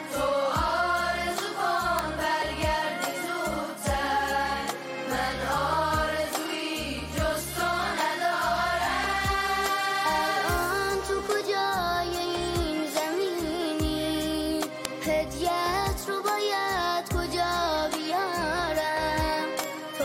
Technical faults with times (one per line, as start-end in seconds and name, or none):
1.99 bit error spike
14.85 bit error spike
19.64 bit error spike